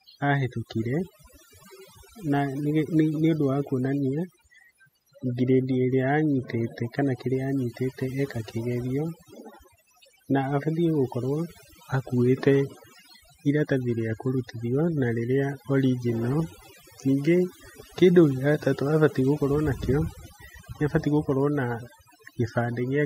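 Overdone noise removal runs throughout: aggressive band-by-band suppression leaves near-silent gaps with twinkling specks, and strips quiet speech detail.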